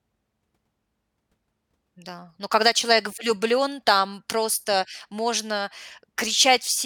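No technical faults detected anywhere in the speech.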